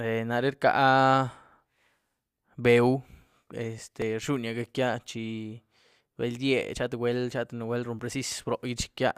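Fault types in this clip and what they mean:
Overlap between stream segments: two tiny skips break the speech at 4.02 s and 7.99 s, each a skip of only a few milliseconds where the waveform jumps instead of flowing on. Both land on boundaries of 2-second segments. The time stamps of neighbouring segments overlap there, so the player discards the apparently doubled stretch even though that sound was never actually repeated. A sliver of real audio disappears, leaving the audible discontinuity.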